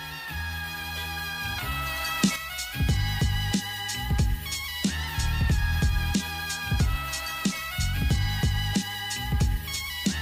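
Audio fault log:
2.36 s to the end, one channel drops out: the sound steps down abruptly by about 6 dB and stays down with its tone unchanged, unlike a gradual fade. The likely cause is the loss of one of two stereo channels carrying the same sound.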